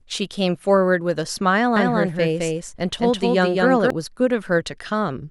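From 1.76 to 3.90 s a doubled audio track appears: a second copy at roughly equal level, about a fifth of a second late, likely from a slower parallel path, starting and stopping abruptly, undecayed, unlike echo.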